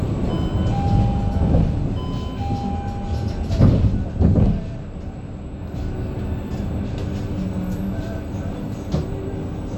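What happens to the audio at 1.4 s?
Nothing goes wrong at 1.4 s; the sound plays through that moment intact, with no dropout, click or distortion.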